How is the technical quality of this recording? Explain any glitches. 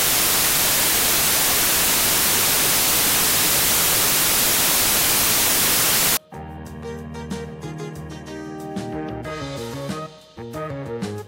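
The technical quality is poor at the start. From 0.0 to 6.17 s the samples are built from the wrong bytes. The reader misaligns or swaps the bytes of each sample. Rapidly changing low bits become the dominant part. The result is loud, harsh broadband noise.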